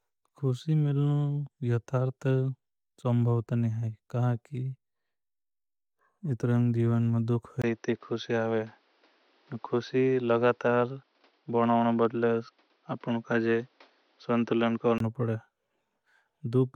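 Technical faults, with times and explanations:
7.62 to 15.0 s, input switched to a poorer device: after a brief gap, the speech turns dull, with nothing above 6.1 kHz and a new noise floor, likely from a narrower-band microphone.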